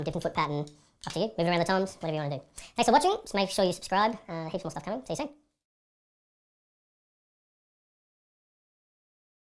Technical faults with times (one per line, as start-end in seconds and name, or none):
0.00-9.50 wrong sample rate